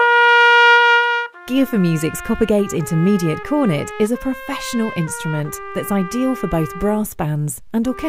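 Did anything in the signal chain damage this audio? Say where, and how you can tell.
No, nothing along the chain seems to have damaged this audio, as there's nothing here that points to a problem at any stage.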